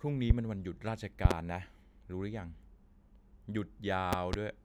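Speech, with loud pops laid on top. A single pop sits at 0.30 to 0.33 s. Double pops follow at 1.25 to 1.33 s and 4.13 to 4.36 s. Each peaks roughly 25 dB above the speech, which carries on beneath. A likely cause is a voltage spike from a switch, plug or static.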